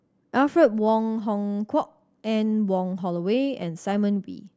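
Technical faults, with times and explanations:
Nothing technical stands out here; the speech comes across without any audible faults.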